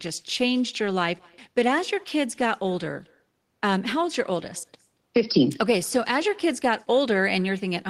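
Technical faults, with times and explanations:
Throughout, echo with no canceller: the far end is playing the call over a loudspeaker, its microphone is picking that playback back up, and no echo cancellation is stripping it out, so the sound returns after the network round trip. Each phrase is trailed around a fifth of a second later by a faint copy, about 28 dB down, that sounds thinner than the original because it has passed through a loudspeaker and the far-end room.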